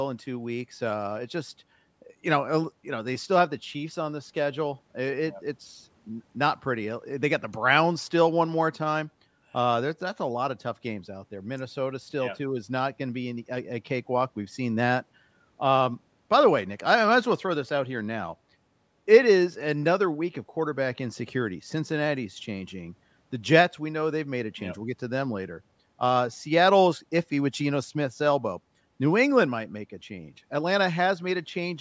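No technical faults can be heard in this speech recording. It carries the sound of call microphone processing, with the lowest bass trimmed away and nothing above 8 kHz, as expected for that path.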